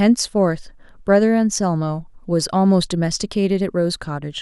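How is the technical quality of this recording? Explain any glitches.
The recording is technically sound, with no glitches or transmission faults anywhere in the speech.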